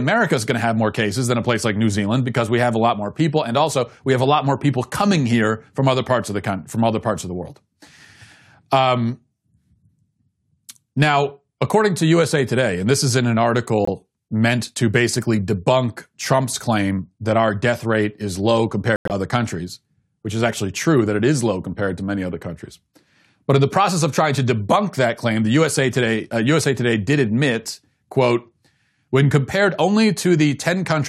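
The speech clip has two holes from corrupt frames being muted. At 13.85 s, after "this is in an", a 36 ms silence cuts in abruptly, which fits one rejected frame. At 18.96 s, after "death rate is low", the audio drops out for 0.16 s, which fits several frames. Unlike a splice or skip, timing is kept, and unlike concealment nothing is filled in. There is just dead silence before "meant to basically debunk" and "other countries which is".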